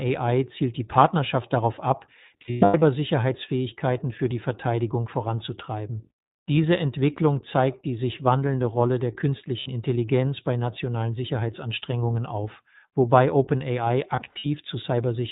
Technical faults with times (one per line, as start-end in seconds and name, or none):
0.00-15.31 iLBC codec
2.42-2.83 lost iLBC frames
9.60-9.68 lost iLBC frames
14.16-14.47 lost iLBC frames